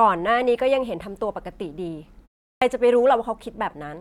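At 2.52 s, after a 0.33 s pause, speech bursts in abruptly with its first 96 ms missing: a clipped start after a pause, as the output device wakes from sleep.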